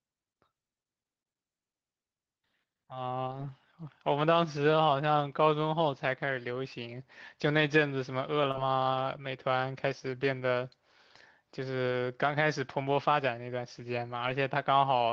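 At 3.27 to 3.49 s, packets failed to arrive and the decoder rebuilt about 120 ms of speech from low-bitrate copies carried in the packets that followed. This is a lost packet rebuilt from error correction. Nothing drops out, but that stretch turns rougher and grainier before clean decoding resumes.

At 8.51 to 8.56 s there is a short concealed packet loss. About 20 ms never reached the decoder in time, so the receiver extended the preceding sound to fill the hole and then blended back. It comes across as a brief smear or wobble. Overlapping its tail, at 8.54 s, a single 20 ms frame was again rebuilt from error correction and adds a moment of coarseness.

The same error-correction rebuild recurs as single 20 ms frames at 10.40 s and 11.92 s, each a fleeting patch of extra grit. It occurs once more at 14.26 to 14.32 s, where about 40 ms sounds rough and noisy. Throughout, the Opus call path limits the audio to about 8 kHz.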